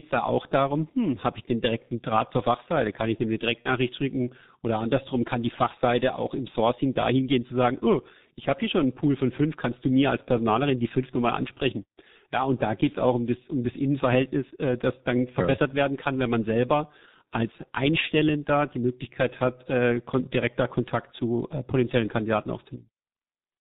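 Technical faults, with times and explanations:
Throughout: G.723.1 codec. A low-rate telephony codec, consistent with about 6.3 kbit/s, discards everything above 4 kHz and models speech coarsely, leaving muffled, hoarse speech with smeared consonants.
3.62–3.69 s: VoIP packet loss concealed by the speech codec. A gap consistent with one lost 30 ms frame was filled by extrapolating the previous pitch and filter, producing a brief buzzy or noisy, fading smear.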